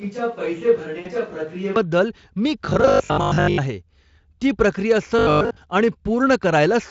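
From the start until 1.76 s the speech sounds roomy, hollow and thin, about 5 dB quieter, with room noise roughly 35 dB below the speech. This is likely a switch to a distant microphone, and the close microphone returns abruptly at 1.76 s. Within that stretch, from 0.99 to 1.07 s, the sound smears into a fading buzzy tone. This is VoIP packet loss concealed by the speech codec: about 60 ms of audio went missing, and the decoder extrapolated from its last frame while lowering the gain. From 2.66 to 3.60 s, and again from 5.19 to 5.57 s, the sound turns into a rigid metallic 50 Hz buzz, robotic sound from repeated short buffers. Most of the real audio in those stretches is skipped and replaced by repeats of the last fragment, likely a 20 ms buffer given the buzz pitch. Inside the first of these, from 2.85 to 3.00 s, a further dropout is concealed in the same way: 20 ms of audio is lost, and the codec's extrapolated fill leaves the sound weak and distorted for a short while afterwards.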